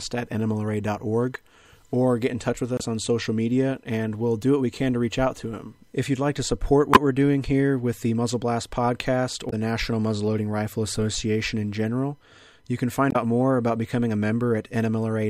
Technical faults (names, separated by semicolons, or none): damaged data in a compressed stream